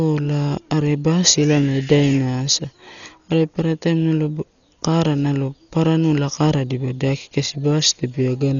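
Dolby Digital compression runs throughout this speech: nothing above 6.9 kHz and a rough, fluttering noise, likely a heavy encode near 40 kbps filling bit-starved frequency lines with dither noise.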